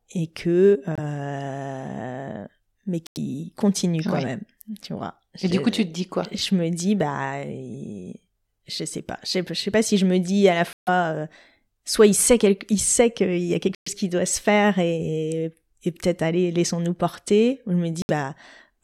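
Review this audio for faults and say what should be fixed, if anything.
The speech drops to silence five times, with short gaps at 0.95 s, 3.07 s (just before "continue quand même tu"), 10.73 s (between "me dis à la" and "euh soit il sait"), 13.75 s (between "qu'il y a quelque" and "qui doit se faire"), and 18.02 s. Each lasts roughly 20 to 140 ms, and the talk picks up as if it had kept going underneath. That's likely a Bluetooth dropout, where late packets get discarded. To prevent it, record from a wired or local source, or keep the Bluetooth link short and interference-free.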